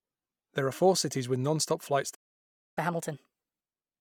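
A speech clip in which the sound cuts out after "cities with nonstop flights" at 2.14 s and stays silent until 2.78 s, about 0.62 s. This playback stall is likely the player running short of data or its thread being blocked. From 2.78 s to the end, the speech runs fast and sounds about four semitones high. This is catch-up at higher speed: the player resamples its backlog at 1.25 times normal speed to recover the lost time, so pitch and tempo rise together.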